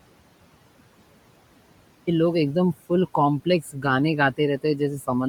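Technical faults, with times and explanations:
0.00–2.07 s, audio dropout to silence: The input was already lost when the clip begins, likely through a dropped link or device, and the recorder kept writing silence. The opening two seconds are dead silence with no room tone at all. The sound then cuts in abruptly mid-flow at "لوگا اکدم فل", so whatever came before that point is missing entirely. The hard edge between total silence and live audio is what gives it away.
Throughout, noise suppressor artifacts: A noise suppressor is pulling down every band it judges to be steady noise, frame by frame, by about 18 dB. The room noise, which sits about 18 dB below the speech, sinks in the pauses and swells back under the words, so the background seems to breathe with the talker.
Throughout, Bluetooth LC3 compression: The signal has been through a low-rate transform codec, likely Bluetooth LC3, with damage that is plainly audible. 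The coder drops much of the finer upper-spectrum detail and fills the gaps with shaped noise, which gives the speech a breathy, grainy edge. The grain fits a bitrate of around 48 kbps with 10 ms frames. The bandwidth is not narrowed, and content reaches up to about 20.2 kHz.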